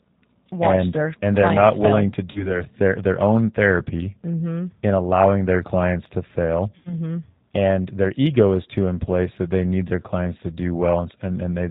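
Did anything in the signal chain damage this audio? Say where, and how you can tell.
Yes. At the codec stage, the speech ran through G.729 at 8 kbit/s. It rebuilds each 10 ms frame from a filter and sparse pulses, so the speech is plainly rough, synthetic and cut off above 4 kHz.

On the network, packets were lost and the G.729 decoder concealed them at 2.31–2.62 s, after "not fail willing to", and at 6.79–6.96 s, after "their clients to fail". The decoder stretched its last pitch and filter into sound that fades. The voice stays weak or distorted afterwards, which fits roughly 40 ms and 60 ms of missing audio.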